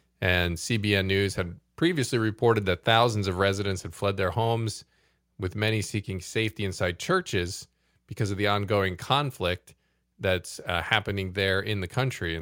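At 3.42 s, between "reported that thousands of" and "had fled their homes", the speech and the room behind it drop abruptly by about 2 dB in a single step. This is a microphone volume stepped down, likely the call software cutting the device's input gain because the level seemed too high.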